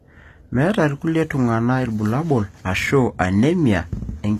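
Throughout the speech, the codec has likely coded only the lower spectrum and rebuilt the treble by copying lower bands upward under a coarse envelope, which is HE-AAC compression at a low bitrate around 24 kbps. The synthetic top end doesn't match the original, so harmonics fail to line up across the crossover. The damage is plainly audible: s sounds turn gritty, metallic or lispy, and nothing remains above 14.9 kHz.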